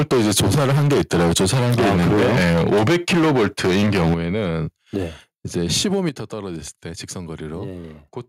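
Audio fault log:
0.00–4.45 s, microphone overload: the loudest syllables have their tops flattened, giving a crackling, distorted edge. The likely cause is an input level driven about 15 dB past the converter's limit, with roughly a third of samples clipped.
5.56–6.09 s, microphone overload: the same cut-off peaks return over a shorter span, with the level about 4 dB over the limit and roughly 3% of samples clipped.
3.14 s, 4.14 s and 6.09 s, microphone volume stepped down: voice and background together drop suddenly in level, by about 2 dB, then about 8 dB, then about 8 dB again. The last drop follows directly on the distorted stretch ending at 6.09 s. The likely cause is call software detecting the overload and lowering the device's input gain in single steps.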